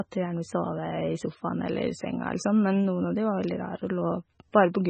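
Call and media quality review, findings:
Throughout the speech: watery, swirly texture, smeared onsets, metallic chirping on sibilants, no content above 8.3 kHz. Likely MP3 compression at a very low bitrate, near 16 kbps: encoder cuts the treble and lets weak spectral lines toggle between frames.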